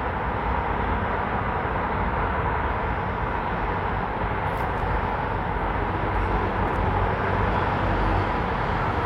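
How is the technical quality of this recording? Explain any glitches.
There are two glitches, both chunks out of order. At 4.78 s one 20 ms chunk plays a chunk late, and at 6.68 s one plays three chunks late. Nothing's lost, but the order is shuffled at hard joins, giving brief jumbled blips.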